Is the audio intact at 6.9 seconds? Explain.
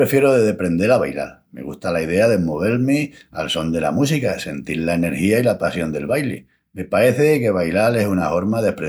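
Yes, the audio is intact at 6.9 seconds, with no dropout, click, distortion or other fault at that moment.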